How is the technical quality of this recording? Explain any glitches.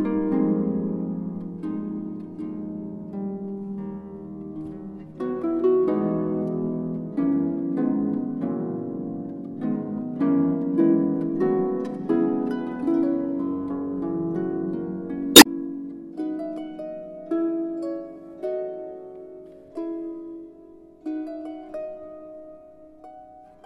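One glitch stands out: damaged data in a compressed stream, from 15.32 to 15.46 s. Corrupted bytes made the decoder misread frames and lose sync until it found the next frame header, producing a brief glitch.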